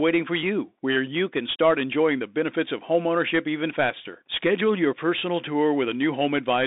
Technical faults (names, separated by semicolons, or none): Bluetooth CVSD headset codec